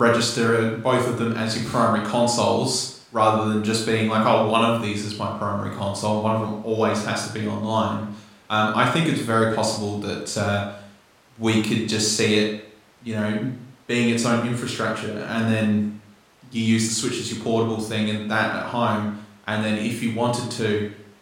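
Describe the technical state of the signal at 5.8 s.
At 5.8 s the speech signal is intact, with no audible fault at that moment.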